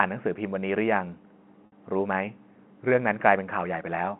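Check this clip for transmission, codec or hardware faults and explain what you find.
One transmission fault is present. Packet loss with pitch repetition occurs at 1.66 to 1.72 s. About 60 ms of speech went missing. The receiver repeated the last pitch period to fill the gap, so the sound briefly holds and buzzes. The audio is carried over G.711 telephone coding, which limits it to roughly 150 Hz to 3.4 kHz.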